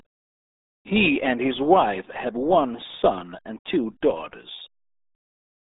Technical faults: RealAudio 14.4 codec

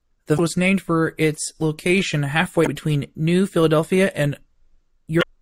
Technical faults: damaged data in a compressed stream

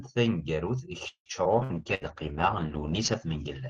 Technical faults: call audio freeze; skip ahead; call bitrate drop; burst of packet loss

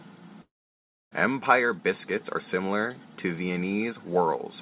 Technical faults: long network dropout

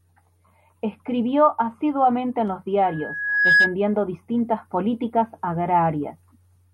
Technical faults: loudspeaker feedback squeal

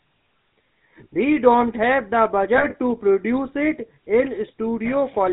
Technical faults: GSM full-rate codec; lost GSM frames

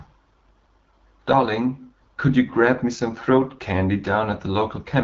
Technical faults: AMR wideband (HD Voice) codec

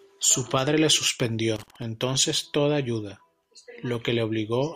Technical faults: loose connector crackle

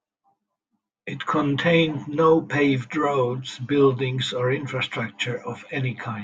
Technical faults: channel delay (comb filtering)

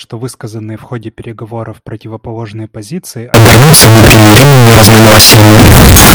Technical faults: signed and unsigned mixed up

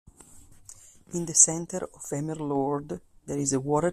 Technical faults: none

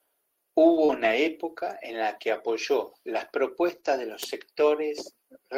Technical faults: short concealed packet loss; lost packet rebuilt from error correction

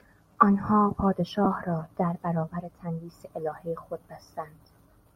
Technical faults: lost LE Audio frames

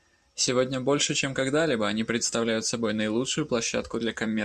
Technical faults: none

